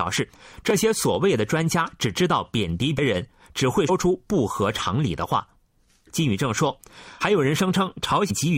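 A brief jump at 0.33 to 0.38 s marks compressed frames skipped: roughly 20 ms of speech is missing.

At 0.70 s a tiny click comes from a repeated buffer. A 1.45 ms slice, which fits a 64-sample buffer, plays twice because fresh audio arrived late.

Further skips follow at 2.97 s and 3.88 s, each losing about 100 ms. Another at 7.18 to 7.22 s drops about 50 ms, and one at 8.29 s drops about 150 ms, all from skipped frames.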